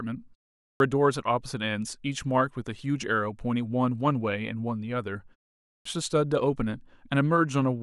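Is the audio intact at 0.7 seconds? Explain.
No. At 0.7 seconds the speech is missing: the sound that resumes at 0.59 s after a 0.32 s silence has its opening swallowed through 0.80 s, about 211 ms in all, so it bursts in abruptly without its first sounds. This is a clipped start after a pause. The output device went to sleep during the silence and had to wake and lock again, and the opening of the returning speech was lost while it did.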